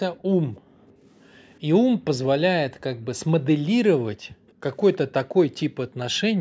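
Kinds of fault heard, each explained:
Echo leak: faint, delayed copies of the speech surface at 0.17, 0.54, 1.13 to 1.58, 4.47 and 4.93 s. Each trails the original by 321 ms and sits very low, roughly 35 to 40 dB under the talker. The likely cause is a far-end loudspeaker whose echo canceller let part of its microphone pickup return. On a spectrogram they appear as dim, time-shifted ghosts of the speech harmonics. On the waveform they are barely visible ripples.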